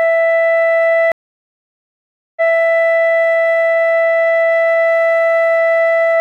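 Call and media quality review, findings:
Stream reconnect, 1.12–2.55 s: music drops out for about 1.25 s, then resumes roughly 0.19 s earlier than where it cut, repeating a short stretch. Probable component: network transport and player. The connection dropped, the client reconnected and began a fresh decoder mid-stream, and the server resent a burst from a point just before the break.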